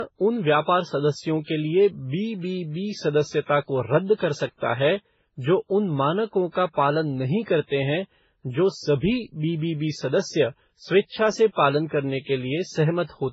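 Throughout the speech, the sound points to transcoding between lossy codecs, likely an MP3 pass near 16 kbit/s re-encoded through WMA and then Vorbis. Nothing remains above 7.6 kHz, and smeared, warbling artefacts of different character overlap, unlike the single consistent texture of one low-bitrate encode.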